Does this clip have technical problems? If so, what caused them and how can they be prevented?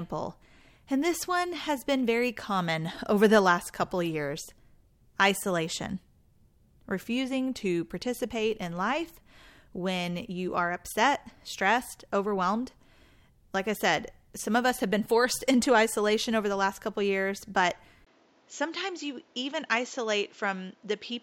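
Yes. At 18.05 s, after a 20 ms gap, the speech turns duller to the end, with nothing above 7.6 kHz and new background noise roughly 35 dB down, at unchanged level. The likely cause is an input switched to a poorer device. Lock the input device and disable automatic switching before recording.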